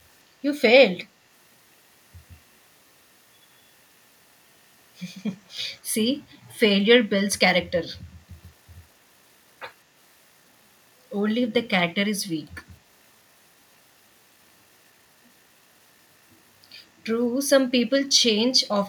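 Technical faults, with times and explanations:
6.32–6.38 s, echo leak: The far end's echo canceller likely let a fragment of its loudspeaker output back into its microphone, and that residue was returned down the line. It arrives 206 ms behind the original speech as a brief ghost copy lasting about 60 ms, sitting roughly 35 dB below the speech, so it registers only as a faint echo trailing the voice.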